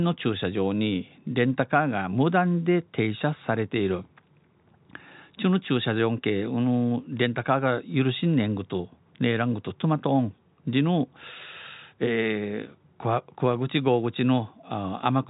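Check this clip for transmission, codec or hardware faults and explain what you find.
No transmission, codec or hardware faults turn up in this speech clip, which simply carries the ordinary telephone-band limit of nothing above 3.8 kHz.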